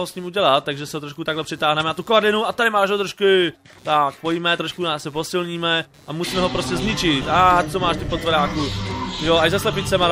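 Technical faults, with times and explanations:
Throughout, computer activity noise: there's a faint buzzy, chirping layer sitting roughly 35 dB under the sound, pulsing at something like 150 times a second. It rises and falls with whatever the machine is doing rather than with the audio itself, which gives it away. Processor, graphics or mouse load is shifting the ground the audio circuit shares with the computer, and those current swings leak straight into the signal as this scratchy, activity-driven buzz.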